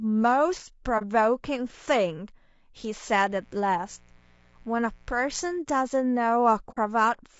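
Across the whole recording the speech has a rough, grainy texture, with noise filling the spaces between the harmonics and a top band that sounds thinned and somewhat synthetic. The damage is plainly audible and is likely low-delay AAC compression (AAC-ELD) at a bitrate around 32 kbps. Its short frames resolve pitch harmonics poorly, so a spectrogram shows smeared, hazy harmonic lines and a speckled, patchy upper band instead of clean stripes.

At 0.98 s the sound briefly drops out, from 0.98 to 1.03 s. This is AAC frame loss with muting, a gap of about 30 ms that fits one lost frame. The decoder zeroed the missing spectrum, and the overlapping windows taper the sound down and back up, so it is a brief, soft-edged dip. The waveform shows a short envelope dip to silence, and the spectrogram shows a narrow vertical blank band.

From 3.29 to 5.59 s a steady, raspy mains buzz sits under the speech. 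Sharp switching spikes twice per 60 Hz cycle give it harmonics of 60 Hz that climb to several kHz. It is faint, well below the speech level. A spectrogram shows evenly spaced horizontal lines at 60 Hz multiples running through the whole stretch.

A second AAC frame loss with muting runs from 6.71 to 6.78 s. The gap is about 60 ms, consistent with two lost frames, so the faded-out hole is longer. It shows as a wider blank column in the spectrogram and a longer tapered dip in the waveform.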